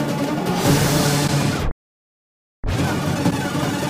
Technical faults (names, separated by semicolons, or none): wrong sample rate